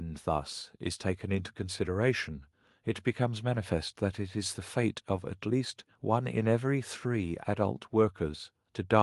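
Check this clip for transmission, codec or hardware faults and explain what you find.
The speech signal stays intact and steady throughout, with nothing in it that points to trouble in the transmission path, the encoding or the equipment.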